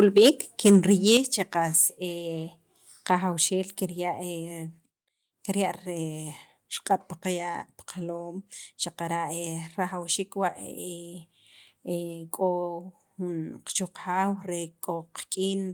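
From 0.0 to 0.29 s and again from 0.66 to 1.17 s, the loudest syllables take on a harsh, crackling edge. This is microphone overload, likely from input peaks driven about 5 dB and then about 6 dB past the converter's ceiling, which flattens their tops. Unlike codec distortion, it appears only on the peaks.

At 0.18 s and 1.17 s, voice and background drop together by about 3 dB and then about 6 dB. This is microphone volume stepped down, likely the call software cutting input gain after the clipping. Each drop is a single abrupt step rather than a gradual limiter fade.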